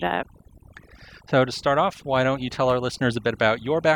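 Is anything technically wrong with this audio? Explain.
Yes. Across the whole speech clip there is overdone noise removal. The noise reduction was pushed too hard, so individual frequency bands near the noise estimate are cut deeply or removed, taking quiet parts of the voice with them. The background drops and breaks up into twinkling, warbling specks.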